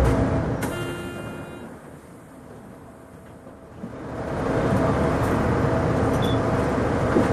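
A recording of sounds with a case of zipper noise from about 0.28 s to 1.67 s, where the level drops by roughly 25 dB in 2 dB steps at around ten steps a second. Instead of gliding down, the gain jumps in coarse increments with no smoothing, and each jump leaves a small click, so you hear a fast ticking riding on the sound during the fade.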